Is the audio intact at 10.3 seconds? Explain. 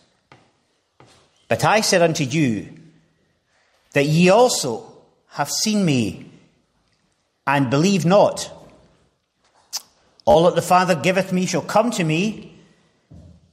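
No. A Bluetooth stutter runs from 10.31 to 10.35 s: late or missing packets made the receiver replay its last short slice of audio, giving a brief buzzy repeat. About 40 ms of sound is lost, which fits a few dropped packets. Unlike a dropout, the gap is filled with repetition, not silence.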